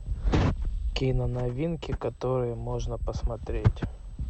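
Throughout the speech runs USB whine, a steady fixed-pitch tone at 8 kHz sitting roughly 45 dB below the signal. The 125-microsecond microframe activity of the USB bus is leaking into the audio path through power or ground, producing a faint, thin high whistle.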